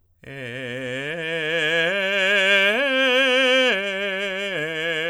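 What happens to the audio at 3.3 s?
Nothing goes wrong at 3.3 s; the music plays through that moment intact, with no dropout, click or other disturbance.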